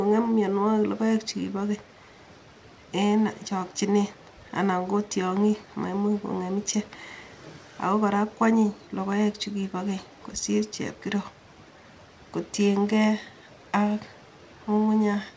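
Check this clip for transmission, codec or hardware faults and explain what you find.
Nothing in the speech points to a fault: it arrives over a call link with its content ending at 8 kHz, which fits a wideband codec such as G.722 running at 64 kbps.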